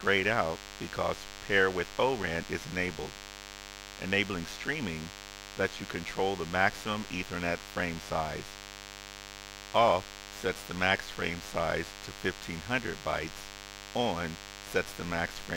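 A steady DECT cordless phone buzz runs throughout. Rectified radio bursts arrive 100 times per second, about 15 dB below the sound. A spectrogram shows a dense comb of harmonics spaced at 100 Hz.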